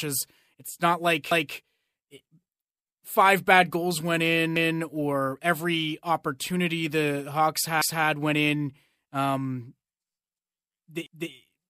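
At 1.31, 4.56 and 11.06 s, overlapping chunks repeat about 250 ms of speech. Each 3 s chunk starts early, so the joins stutter audibly.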